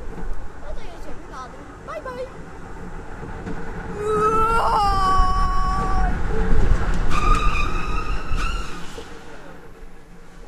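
No technical faults can be heard anywhere in this clip.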